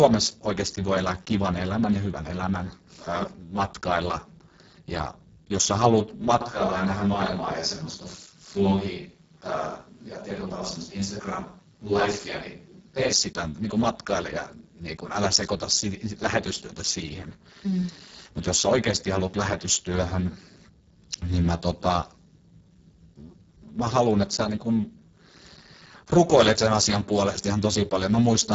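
From start to finish the speech carries heavy Speex codec damage: hoarse, noisy and edging toward robotic, which fits a bitrate near 5.8 kbps. Nothing sounds above 7.7 kHz, and the top band is only shaped noise. Unlike plain low-pass filtering, the voice itself is rough.

From 6.41 s to 13.13 s the voice turns suddenly roomy and hollow, with thinner bass and faint background noise some 40 dB below the speech, likely a switch to a distant microphone. The level hardly changes, so this is a change of pickup, not a gain drop.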